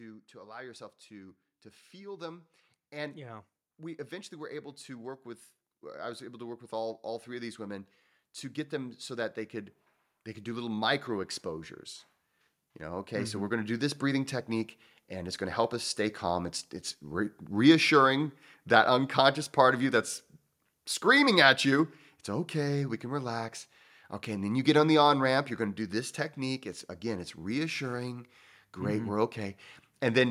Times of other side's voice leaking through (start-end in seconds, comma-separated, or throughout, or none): none